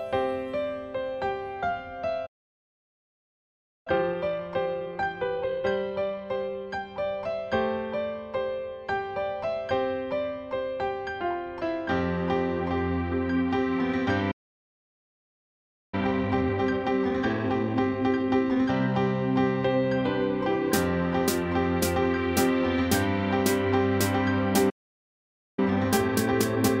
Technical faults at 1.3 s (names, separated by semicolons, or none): none